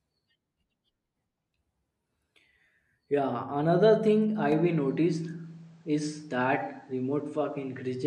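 At 4.52 s, after "another thing I", the speech loses everything above 9.2 kHz and gains background noise, likely an input switched to a poorer device.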